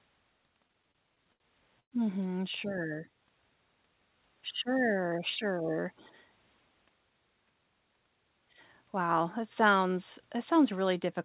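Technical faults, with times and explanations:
0.68–1.43 s, repeated stalls (stutter): eight short breaks, the longest 67 ms, add about 161 ms of repeated sound, roughly a fifth of that span. The jitter buffer kept running dry and the receiver extended the last sound each time, so the audio drags without losing anything.
1.80–1.95 s, call audio freeze: the sound holds as a fading continuation, then about 80 ms of silence, 118 ms in all, before resuming where it stopped. The likely cause is packets delayed in transit emptying the jitter buffer. Everything after plays 118 ms late.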